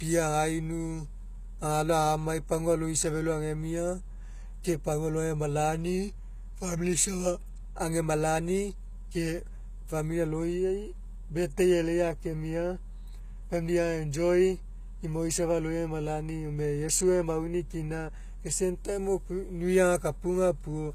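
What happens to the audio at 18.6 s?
At 18.6 s, as throughout, the speech has HE-AAC compression. Treble is likely rebuilt from copied lower bands. S sounds turn gritty, and nothing exceeds 14.9 kHz.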